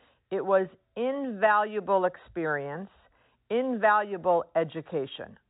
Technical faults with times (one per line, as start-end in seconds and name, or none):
none